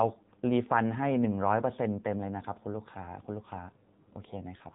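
It's a short speech clip that's been through the AMR narrowband mobile codec for its whole length, so it has that classic phone-call sound. Everything above about 3.8 kHz is gone, which takes the air and sibilance off the voice. The codec rebuilds speech from a vocal-tract model fed by a few pulses per subframe, and here the damage is plainly audible: a buzzy, synthetic edge that fits one of the lower modes, around 7.4 kbps.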